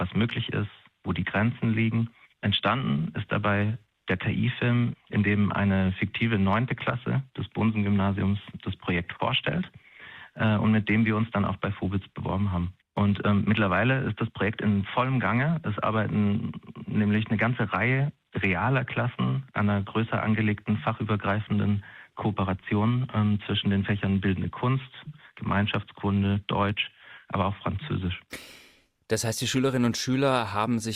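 No technical faults can be heard anywhere in the audio.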